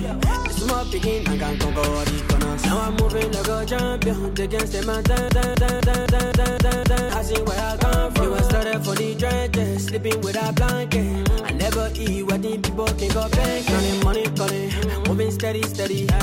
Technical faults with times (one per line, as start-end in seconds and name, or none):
5.29-7.10 broken-record loop